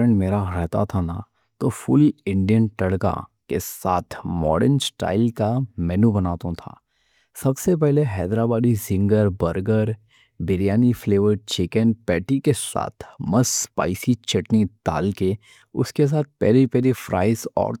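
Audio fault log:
Nothing to log here, as this speech recording comes through without a single problem worth noting.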